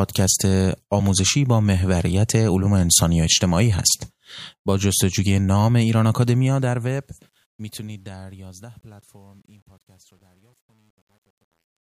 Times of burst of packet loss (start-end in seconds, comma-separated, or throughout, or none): none